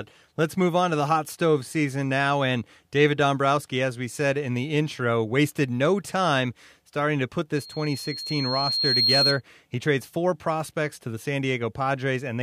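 From 7.55 to 9.41 s a single 4.2 kHz tone swells over about one and a half seconds into a squeal, ending up roughly 5 dB above the speech: loudspeaker feedback squeal, where the microphone re-amplifies its own loudspeaker output.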